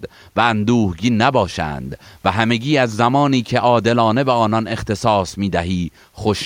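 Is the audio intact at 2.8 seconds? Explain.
Yes, the audio is intact at 2.8 seconds, with no fault at that moment.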